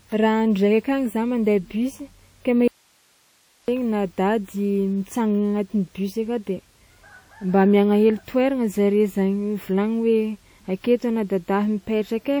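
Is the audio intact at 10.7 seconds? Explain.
No, at 10.7 seconds the speech carries the same codec damage heard across the whole clip. It rings and sounds washy, with a hiss that breathes along with the voice. That's likely WMA compression, probably an early WMA version at a low bitrate around 48 kbps. The encoder's long transform blocks smear quantisation noise over tens of milliseconds, and weaker spectral detail gets zeroed out. The top still extends to about 20.1 kHz.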